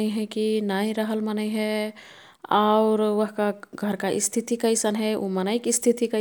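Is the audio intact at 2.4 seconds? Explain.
Yes, the audio is intact at 2.4 seconds, with no dropout, click, distortion or other fault audible in the speech at that point.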